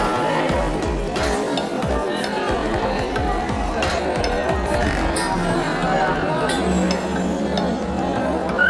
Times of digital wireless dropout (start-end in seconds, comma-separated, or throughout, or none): none